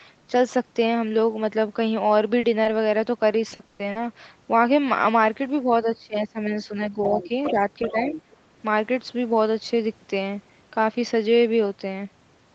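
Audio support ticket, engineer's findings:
Brief smear at 2.39–2.45 s and 2.63–2.67 s: short concealed packet loss, 40 ms and 20 ms of audio missing, patched by extending the preceding sound, then crossfaded back.

Choppy, robotic sound 3.49–3.97 s: repeated packet loss, four gaps, longest 120 ms, nearly half the span synthesized by concealment, pieces of sound missing.

Speech dips 5.64–7.57 s, deepest about 15 dB down, roughly 0.7 s affected; again 7.91–8.14 s, about 10 dB. Likely speech suppressed in double talk: echo canceller ducking near-end while far end active.

Second voice 7.03–8.22 s, about 15 dB below speech. Likely the other side's voice leaking through: loudspeaker echo not fully cancelled from the mic.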